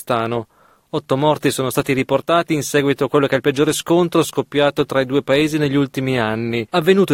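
From 0.68 to 1.10 s a burst of processor overload crackle tears through the sound. The processor missed a run of short buffer deadlines, each roughly a few milliseconds, leaving around ten tiny silent gaps with hard edges. Unlike a single dropout, these clustered clicks sound gritty and stop once the load eases.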